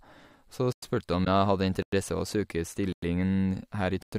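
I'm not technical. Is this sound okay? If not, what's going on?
No. At 0.73, 1.83, 2.93 and 4.02 s the speech stops dead for a tenth of a second. This is a gap between chunks: the audio arrives in one-second pieces with silence left at each join.

At 1.24 to 1.27 s there is a brief, soft dropout. This is AAC frame loss with muting: one tiny slice of data went missing and was faded to silence.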